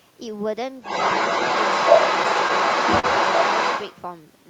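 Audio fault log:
throughout: clock drift between sender and receiver. Small timing hiccups recur at uneven intervals, with brief catches, repeats or momentary gaps. The sending clock runs slower than the receiving one, by around 2 percent, so the jitter buffer keeps draining and the receiver patches over the shortfall.
0.82–4.01 s: other side's voice leaking through. A second voice runs alongside the speech for most of the clip, roughly 10 dB above the main talker. The likely cause is the far end playing back on a loudspeaker, with echo cancellation leaving much of it in.
2.99–3.05 s: short stall from a late packet. A sound is held unnaturally long, with a slight buzz or dip, for about 41 ms. The jitter buffer ran dry, so the receiver stretched the last audio until the packet arrived. Nothing is lost, but playback lags 41 ms more afterwards.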